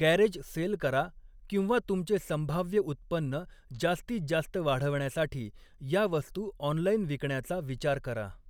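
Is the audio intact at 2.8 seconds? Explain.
Yes, the speech at 2.8 seconds is intact, with no dropout, glitch or other fault at that moment.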